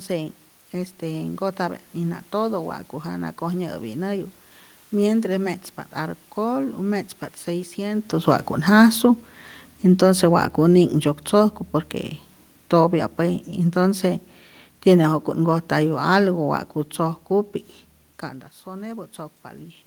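Automatic gain falling sets in from 8.13 s to 16.48 s: the gain control judges the input too loud, or its background noise too strong, and lowers its gain by about 8 dB. The speech fades gradually across that span, and the room noise fades with it.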